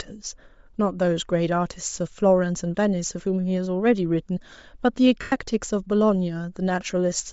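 Throughout the speech, the audio has likely passed through Bluetooth LC3 compression at a low bitrate, consistent with around 32 kbps in 10 ms frames. The codec discards much of the upper spectrum and fills it with noise, which gives the voice a plainly audible breathy, grainy edge.

From 5.21 to 5.32 s, about 110 ms of lost LE Audio frames, matching eleven 10 ms frames, forces the decoder to repeat the last spectrum with scrambled signs and then fade it. The voice briefly turns into a noisy smear that dies away.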